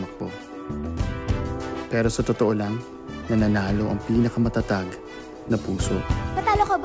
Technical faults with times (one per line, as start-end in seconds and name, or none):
none